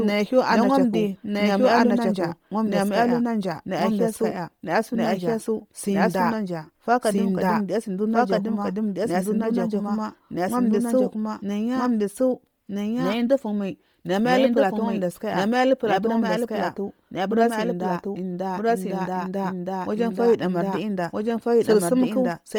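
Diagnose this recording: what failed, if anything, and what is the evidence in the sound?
A doubled audio track runs throughout. A second, full-band copy trails the speech by about one and a half seconds at roughly equal level. It carries no decay or room colour. This is likely a storage or editing stage holding two misaligned copies.

The codec stage shows Bluetooth LC3 compression. The speech has a heavy breathy, grainy edge throughout. The upper spectrum is sparse and noise-filled, though content reaches 20.2 kHz. The damage likely comes from LC3, and fits 32 kbps with 10 ms frames.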